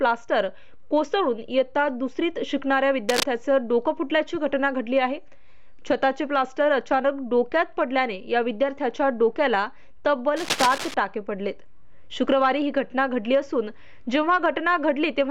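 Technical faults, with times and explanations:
3.09–3.24 s: cable scratch noise. A brief burst of dense, irregular crackle sits over the sound at about the same level as the signal itself, so it competes with it for roughly 0.15 s. This is likely a worn cable or connector being moved, its contact resistance jumping rapidly and chopping noise into the signal path.
10.36–10.94 s: cable scratch noise. A longer rustling scratch of about 0.58 s, roughly 5 dB below the signal, runs beneath the sound. The uneven, gritty texture likely comes from the same kind of unstable contact in a cable, plug or control.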